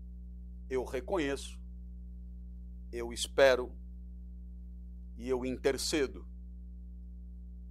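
A ground loop or nearby transformer is coupling the 60 Hz power line into the signal path for the whole clip, producing mains hum: a steady low tone at 60 Hz with some low harmonics, sitting roughly 15 dB below the sound.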